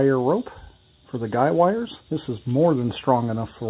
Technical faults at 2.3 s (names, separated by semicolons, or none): none